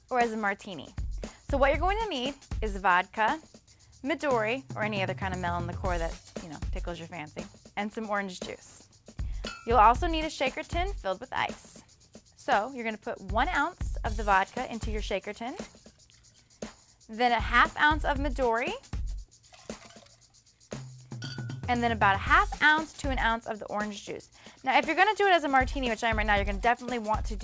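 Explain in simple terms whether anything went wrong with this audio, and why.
Nothing went wrong with this audio: it travelled through an ordinary internet call connection, whose audio compression keeps sound only up to 8 kHz, and that missing top end is the normal limit for this kind of call, not a fault.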